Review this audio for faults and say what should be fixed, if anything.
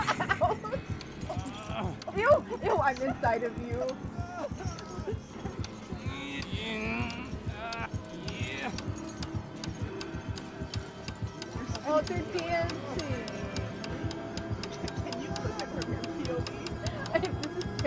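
From 0.0 to 9.84 s there is a 50 Hz buzz from the resampler being restarted on every block. Each 20 ms block was converted in isolation, which fits a 44.1 kHz to 16 kHz conversion, leaving a small error at every block edge. Unlike mains hum, it disappears whenever the signal does. Keep the resampler's filter state running continuously across blocks instead of resetting it for each one.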